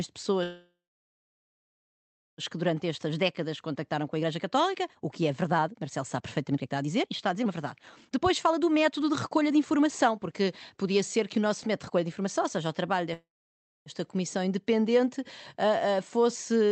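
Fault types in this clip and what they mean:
Call audio freeze: sound stalls into a short fading buzz, then silence, at 0.43 s and 13.13 s, likely from delayed packets draining the jitter buffer.
Jitter buffer speed-up: from 2.54 to 12.95 s speech sounds hurried at 118% speed with unchanged pitch, as repeated pitch-period cuts shed roughly 2 s of delay.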